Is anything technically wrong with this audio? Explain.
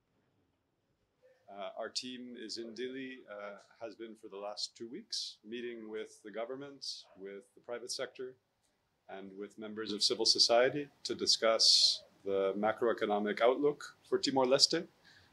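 Yes. At 9.89 s there is a sudden gain jump that lasts to the end of the clip. The digital gain was most likely changed between one sample and the next, with no ramp to ease it in, as happens when a level setting or bit shift is applied instantly. Because the change acts on the whole signal, the sound and its background noise both step up by about 9 dB at the same instant and stay at that higher level.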